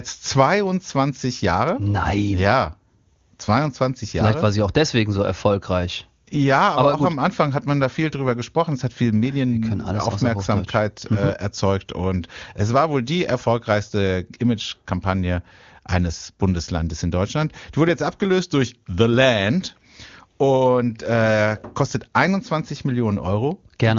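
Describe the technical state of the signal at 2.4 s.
At 2.4 s the speech is intact, carried through the AMR wideband (HD Voice) codec at its 23.85 kbit/s top rate with at most faint coding damage and no content above about 7.2 kHz.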